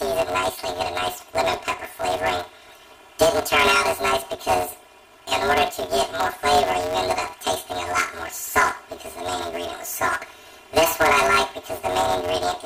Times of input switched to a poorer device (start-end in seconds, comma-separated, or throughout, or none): none